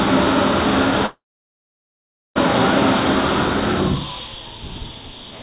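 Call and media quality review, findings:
Long network dropout, 1.06–2.37 s. Last sound held as a fading buzz, then about 1.2 s of silence. Resumes further on with the lost part skipped. Likely cause: jitter buffer starved, concealment exhausted. A short loss glitch would not go silent. Bandwidth tops out at 4 kHz throughout, consistent with the G.711 A-law call path.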